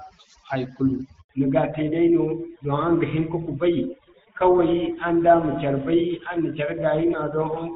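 A speech recording with overdone noise removal throughout. The background drops and breaks up into twinkling specks, because individual frequency bands near the noise estimate are cut hard along with quiet parts of the voice. Steady hiss or broadband muffling would not produce those isolated, flickering tones. At 1.21 s a handover gap cuts the sound for 80 ms, until 1.29 s. The voice fades within a few tens of milliseconds and then goes completely silent while the call switches networks. That smooth fade into true silence distinguishes it from a dropout caused by packet loss, which usually breaks off abruptly or fills with concealment noise. From 1.29 s to the end there is a fallback to narrowband: everything above 4 kHz disappears, and the voice turns duller and rougher. This fits a drop from AMR-WB at about 12.65 kbit/s, whose coding damage before the switch is light, to GSM full rate. 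Because the cutoff is a sudden, permanent step, it cannot be a gradual low-pass or mistuned equalisation.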